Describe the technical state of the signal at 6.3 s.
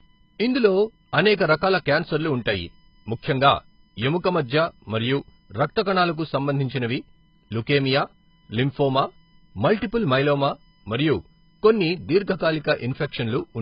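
USB whine is present at 6.3 s, as throughout the clip: bus current in 1 ms frames leaks through power or ground, giving a fixed 1 kHz whine whose harmonics peak near 17 kHz, about 40 dB below the speech. Heavy AAC compression damage runs through this moment too: nothing survives above 5.2 kHz, leaving the speech dull, smeared and warbly, which likely points to AAC-LC at a very low bitrate around 16 kbps.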